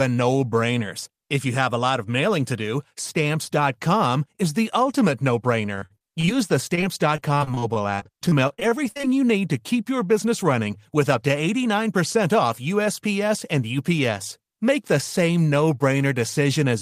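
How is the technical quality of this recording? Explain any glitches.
Repeated packet loss (robotic sound) disrupts the speech from 5.75 to 6.29 s and from 6.75 to 9.05 s. Lost packets are patched by extending prior audio, leaving choppy gaps up to 44 ms, visible as smeared, repeated spectrogram frames and waveform breaks.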